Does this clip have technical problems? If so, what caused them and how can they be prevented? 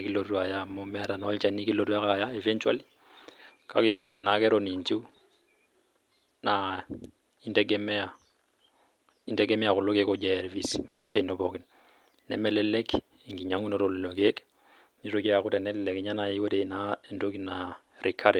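Yes. At 3.87 to 4.25 s and 10.87 to 11.17 s the sound smears into a fading buzz, lasting about 0.36 s and 0.28 s, and the second ends in 90 ms of silence. This is likely a long network dropout: no packets arrived, so the receiver extended the last sound until it decayed, and that stretch of speech never returned. Unlike brief packet loss, the concealment audibly fades out. A more stable network path would prevent it.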